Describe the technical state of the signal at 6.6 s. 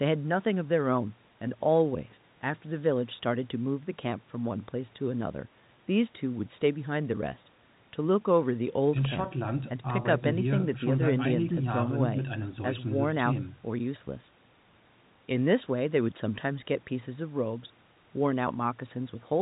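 At 6.6 s the signal is intact, with the speech carried over G.711 telephone coding as normal and nothing heard above about 3.8 kHz.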